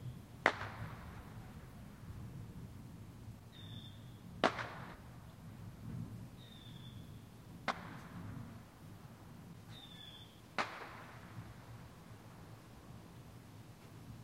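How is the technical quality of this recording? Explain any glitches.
The recording has repeated dropouts from compressed frames skipped, at 2.08, 3.54, 4.94 to 4.96, 6.31, 7.70 to 7.72, 8.98 and 10.39 to 10.41 s. Whole blocks of encoded audio were never decoded. Each time, the sound jumps ahead by roughly a sixth to nearly half a second.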